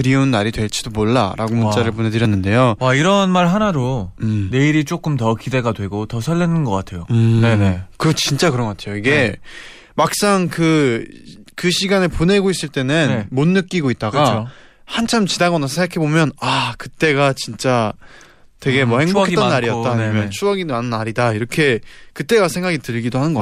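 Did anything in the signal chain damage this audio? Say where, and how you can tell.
No, nothing in the signal chain has left an audible mark on this speech recording. At no point can any stage of capture, conversion, transmission or playback be heard altering the sound.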